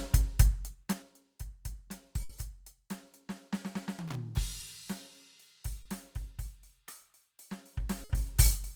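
From 0.65 to 1.12 s the music ticks as it drops about 15 dB. This is zipper noise: the level falls in 3 dB steps, roughly ten per second, with no smoothing between them.

At 2.23 to 2.30 s the sound freezes into a held, fading tone, then jumps ahead. This burst of packet loss left 60 ms missing, which was filled by continuing the last audio.

From 4.08 to 4.15 s a ragged scratching burst breaks through. This is loose connector crackle, from a contact rapidly making and breaking.

A brief smear at 4.60 s and a longer wobble from 5.82 to 5.86 s come from short concealed packet loss. Gaps of 10 ms and 30 ms were patched by extending the preceding sound.

From 7.71 to 8.45 s the zipper noise returns as the level climbs about 15 dB in 2 dB steps, again about ten per second. Within that rise, from 8.04 to 8.10 s, a second burst of packet loss holds and fades the sound over a 50 ms gap before the music resumes further on.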